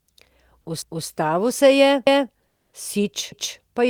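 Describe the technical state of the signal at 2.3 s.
At 2.3 s the speech is inside an overlapping chunks fault running from 2.07 to 2.32 s: a new 1.0 s chunk begins 250 ms before the previous one finished, so that stretch plays twice as a stutter. On a waveform or spectrogram the same 250 ms pattern appears back to back, with a discontinuity at the join.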